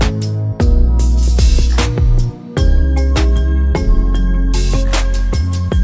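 Everything here runs slow and sits low, start to finish, the classic wrong sample rate symptom. The audio is being played back at roughly 0.73 times its proper speed, so it drags and the pitch drops by about five and a half semitones, with both shifting together. That ratio fits material recorded at 22 kHz being clocked out at 16 kHz with no conversion in between, so the samples just get stretched.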